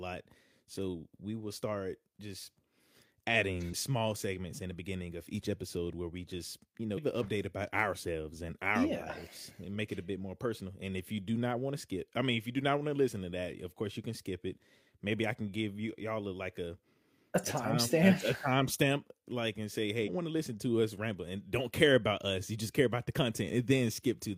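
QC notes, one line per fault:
3.69–3.74 s, 6.93–6.99 s and 20.03–20.09 s: damaged data in a compressed stream. Each event is a brief disturbance lasting about 50 to 60 ms inside the speech. Corrupted bytes make the decoder misread a frame and lose sync until it finds the next valid frame header.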